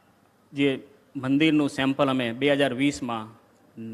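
No technical faults can be heard at any point in this audio.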